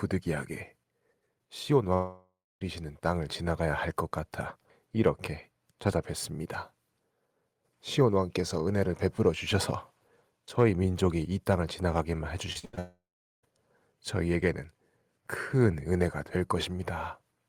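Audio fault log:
1.93–2.63 s and 12.79–13.45 s, long network dropout: the sound stretches into a fading buzz, then silence for about 0.26 s and 0.41 s, likely from a network outage losing about 0.68 s and 0.64 s. The waveform shows a decaying smear, then a flat gap, and the spectrogram shows blurred harmonics, then a blank band.
12.53–12.79 s, repeated packet loss (robotic sound): four short holes, the longest 77 ms, are patched by repeating the preceding sound. That patching covers about 62% of this stretch and makes it choppy. The spectrogram shows striped, frozen harmonic blocks, and the waveform shows repeated chunks.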